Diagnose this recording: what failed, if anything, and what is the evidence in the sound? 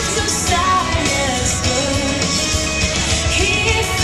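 Nothing failed; no fault is audible at any stage.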